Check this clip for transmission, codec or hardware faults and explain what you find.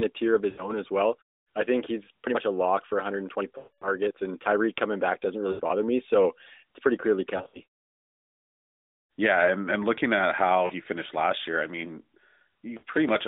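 Yes, there are transmission faults: lost AMR speech frames at 0.50–0.72 s (after "a tier of", before "as well I think"), 3.58–3.90 s, 5.52–5.62 s, 7.38–7.60 s (after "it's pretty clearly"), 10.66–10.71 s (after "and looking at how", before "finished last year I") and 12.78–12.83 s. The narrowband AMR link, with its 250 Hz to 3.7 kHz band and light coding texture that fits the 12.2 kbps mode, is not itself at fault.

Lost AMR speech frames: corrupted frames failed their checks, so the decoder extrapolated from the last good frame with falling gain. The 40 ms gaps give short dips. The 80 ms gaps smear. The 240 ms run at 3.58 s stretches into a fade to silence. Around 7.4 s, losses scattered over 160 ms produce a choppy warble.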